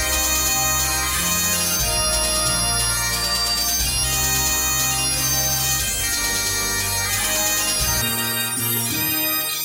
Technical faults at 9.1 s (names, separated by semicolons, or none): audio read two samples at a time (double speed)